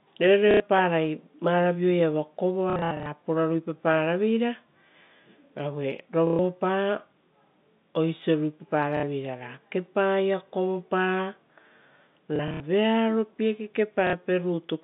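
The sound stutters at 0.51–0.6 s, in a scattered patch from 2.7 to 3.06 s, at 6.27–6.39 s, at 8.97–9.03 s just before "ra kepaia", across 12.36–12.6 s, and at 14.07–14.13 s. This is packet loss with the last packet repeated. The receiver replayed its most recent packet to cover the missing audio, and each event loses between 60 and 210 ms. The fill loops at a rate that fits 30 ms packets, so longer runs buzz at about 33 Hz. That buzz is what separates it from silent dropouts. It also stands out against the steady, narrow telephone band of the G.711 line.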